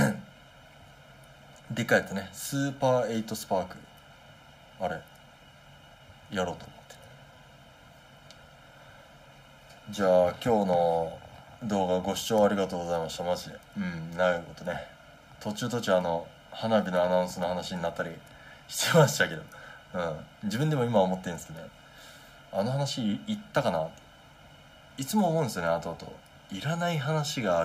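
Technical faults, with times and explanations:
throughout: channel delay (comb filtering), a hollow, phasey sound. One channel lags by around 1.5 ms, so mono summing cuts evenly spaced notches starting near 400 Hz.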